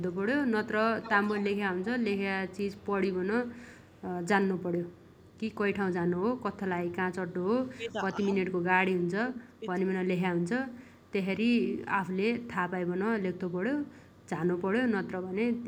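A faint delayed copy of the speech trails the talker by 140 ms at 0.00–0.16 s, 3.59–4.03 s and 4.89–5.34 s, about 35 to 40 dB down, and much more clearly at 1.02–2.86 s, about 15 dB below the speech. This is echo leak, likely from a far-end loudspeaker whose echo canceller let some of the voice back through.

Between 7.59 and 10.12 s the talker's voice dips and drops out in pieces for around one and a half seconds in total, by as much as about 25 dB. This is speech suppressed in double talk, likely caused by an echo canceller that could not tell the talker from the echo while both sides spoke, so it turned both down. Brief echo leak also appears within this stretch at 9.53–9.59 s.

The same 140 ms echo returns faintly at 10.92–11.11 s and 14.05–14.21 s, about 35 to 40 dB below the speech.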